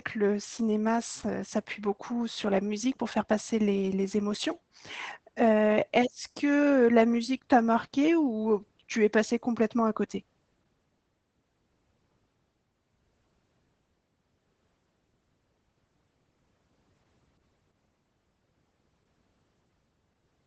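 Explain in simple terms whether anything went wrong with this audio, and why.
Throughout the whole recording, the speech carries Opus voice compression, and the damage is plainly audible. To squeeze the sound into a small data stream, the Opus coder ran in its speech-only SILK mode, which models the voice rather than storing the actual waveform, and discarded everything above about 8.4 kHz. That is why the voice sounds dull and muffled, with a hoarse, slightly synthetic edge where the coarse modelling loses detail.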